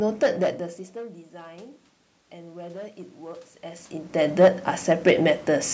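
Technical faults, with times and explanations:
throughout: hard clipping. The speech is driven about 9 dB past what one stage can pass, so the loudest peaks, around two percent of samples, are sliced flat. On the waveform those peaks show as squared-off plateaus pinned at the same level. On the spectrogram each clipped peak throws vertical streaks of added harmonics up toward the 8 kHz ceiling of the call microphone path. The result is a gritty crackle riding on every loud syllable.
0.94 to 4.59 s: automatic gain rising. The input falls by about 20 dB, and the gain control responds by slowly raising its gain by about 6 dB across these 3.7 s. Speech and room noise swell together, so the background grows along with the voice. The waveform envelope climbs gradually rather than stepping up. On the spectrogram the noise floor between syllables brightens steadily. The quicker level shifts near 0.5 and 3.5 s come from the talker moving relative to the microphone.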